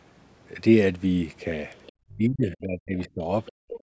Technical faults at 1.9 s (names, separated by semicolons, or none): other side's voice leaking through; speech suppressed in double talk